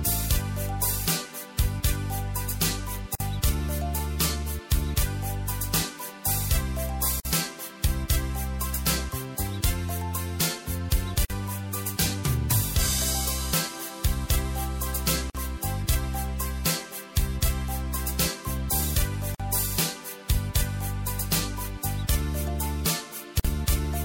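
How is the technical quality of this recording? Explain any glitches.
The recording is marred by regular dropouts. Gaps at joins of encoded pieces occur at 3.15, 7.2, 11.25, 15.3, 19.35 and 23.4 s, each 49 ms and about every 4 s. Separately encoded segments were joined untrimmed, keeping each encoder's start delay and last-frame padding, so continuous sound drops out, with the codec smearing the gap's edges, then resumes where it stopped.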